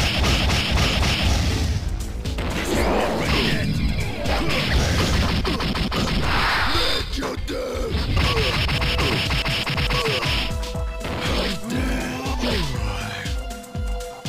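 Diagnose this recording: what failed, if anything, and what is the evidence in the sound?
No failure detected in this recording.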